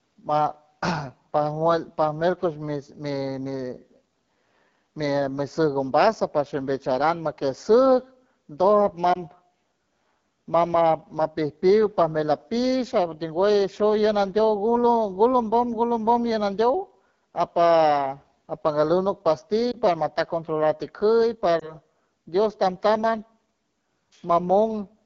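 Throughout the speech there is a rough, raspy edge, with breathy, noise-like hiss in the top band instead of clean upper detail. This is the AMR wideband (HD Voice) codec running near the bottom of its rate range, and the degree of roughness points to the 8.85 kbit/s mode. At that rate the pulse model of the voice is coded too coarsely below 6.4 kHz, and the 6.4 to 7 kHz band is filled with shaped noise.

Three short glitches follow: 9.13 to 9.18 s, 19.72 to 19.77 s, and 21.60 to 21.75 s. Each is a brief dip or warble, after which the voice returns weak or rough for an instant. These are lost AMR speech frames, and each event fits a single missing 20 ms frame. The decoder covered each gap by repeating the previous pitch and vocal tract settings at reduced gain.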